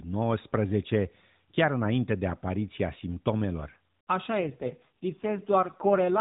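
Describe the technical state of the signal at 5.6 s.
At 5.6 s the speech is inside an AMR rate drop running from 4.40 to 6.20 s: the codec falls to a lower mode, consistent with roughly 4.75 kbps, making the voice rougher and more synthetic at the same bandwidth.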